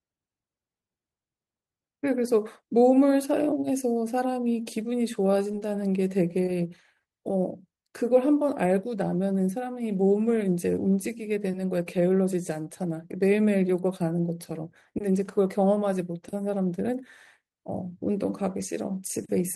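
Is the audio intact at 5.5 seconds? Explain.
No. From 5.51 to 5.55 s there is a short concealed packet loss. About 20 ms of the speech never arrived at the decoder in time. The receiver patched roughly 14 ms of that gap by extending the preceding sound, following its pitch if voiced or using shaped noise if not. It then crossfaded back into the real signal. The result is a brief smear or wobble, and a short consonant there may be lost.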